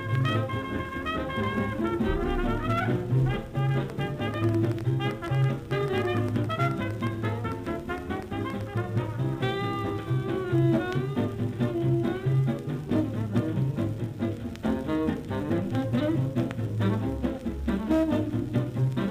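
From 3.90 to 8.78 s, a train of clicks ticks over the sound. Roughly 30 similar pops arrive unevenly, near six per second. They stand about 5 dB above the audio. Likely cause: interference, or a faulty connection or power supply, injecting repeated pulses.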